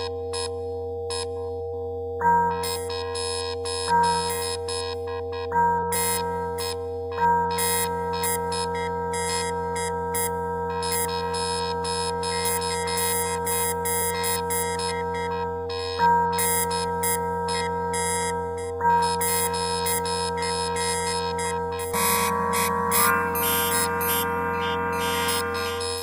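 A recording of sounds with a stream segment skipped at 21.93 to 21.97 s: a brief blip, then the sound jumps ahead. Unlike a buffer dropout, it doesn't pause and resume. A stretch of material is simply gone, likely because one stream segment failed to load.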